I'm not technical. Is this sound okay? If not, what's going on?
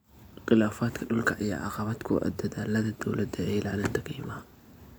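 Yes, nothing stood out as a problem when listening to this recording.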